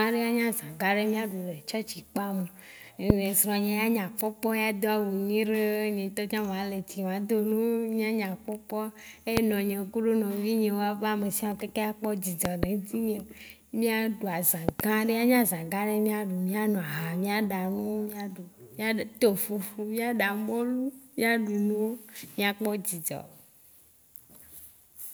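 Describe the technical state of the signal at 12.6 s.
At 12.6 s a loud pop is under way, spanning 12.45 to 12.66 s: two sharp thumps, roughly 20 dB above the speech, which continues beneath them. The likely cause is a voltage spike from a switch, plug or static. Expect tall waveform spikes and vertical broadband streaks on a spectrogram.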